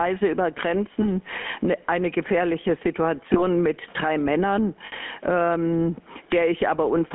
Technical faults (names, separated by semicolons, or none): gain pumping; GSM full-rate codec; lost GSM frames